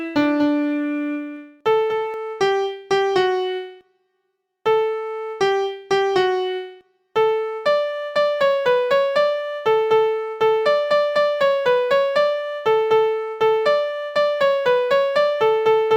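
A second, slower capture path or an out-of-step edit likely mixed the audio in twice, producing a doubled audio track already under way at the start. Until 2.14 s, a dry, full-band copy trails about a fifth of a second behind, around 5 dB quieter, then stops abruptly.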